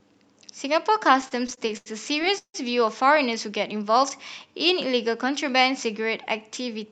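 From 1.21 to 2.56 s the speech shows repeated stalls (stutter). Packets arrived late, the jitter buffer kept running empty, and the receiver stretched the last sound across eleven gaps, the longest 160 ms, fading the longer fills. Nothing is lost, but about 366 ms, roughly 27% of that span, is concealment, so delivery drags and stutters.

Between 3.59 and 3.99 s a jitter buffer slow-down is audible. With the buffer short of reserve, single pitch periods were repeated many times, adding 41 ms and running the audio at 91% speed. Pitch holds steady while sounds are drawn out.

The final stretch, 6.60 to 6.91 s, carries a jitter buffer speed-up. The buffer held more audio than its target, so short pitch-period pieces totalling about 50 ms were cut, giving 113% speed. The speech sounds hurried at unchanged pitch, over the Opus call path's band limit of 8 kHz.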